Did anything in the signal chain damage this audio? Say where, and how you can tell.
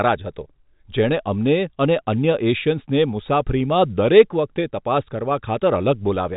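No, nothing stood out on listening that would point to damage from any stage of the chain.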